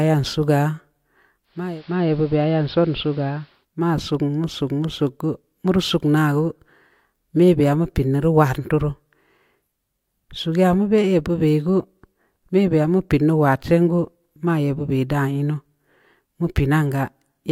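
Speech, with a digital radio blending to analogue event from 1.43 s to 3.66 s: the receiver cross-fades over 408 ms to the AM broadcast, so hiss rises to roughly 30 dB below the signal, and level drops about 2 dB.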